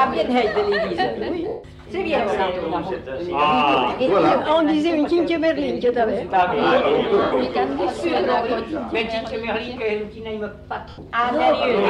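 Bluetooth LE Audio frames were lost three times: from 1.48 to 1.64 s (160 ms, which fits sixteen 10 ms frames), then from 7.23 to 7.32 s and from 10.89 to 10.98 s (90 ms each). The LC3 decoder filled each gap by repeating the last spectrum with random signs, so tones smear into noise. In the longer first gap that smear also fades away. The light lossy compression leaves only faint traces.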